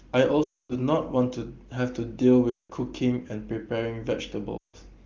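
Speech with three bursts of lost AMR speech frames, at 0.43–0.77 s, 2.50–2.71 s and 4.57–4.76 s. The decoder stretches the last good frame with falling gain, so each gap drops to near silence within two frames. A spectrogram shows smeared harmonics fading to a blank band.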